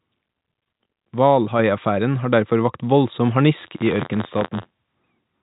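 A speech recording carried over G.711 telephone coding, band-limited at 3.8 kHz, with two faults. At 1.59 s the microphone volume stepped up: the call software raised the input gain in one step, so voice and background jump together by about 4 dB. From 3.55 to 4.82 s, just after "vakt voldsom", buffer tearing sets in: writer and hardware reader cross inside each period, splicing a small slice of audio from about 40 ms earlier into every buffer, heard as a robotic 86.1 Hz buzz, which fits a 512-sample buffer.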